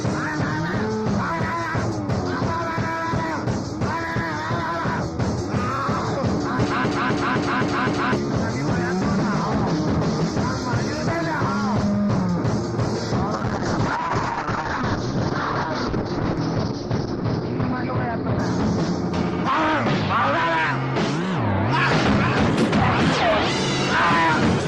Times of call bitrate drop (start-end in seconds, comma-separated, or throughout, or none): 13.34-18.95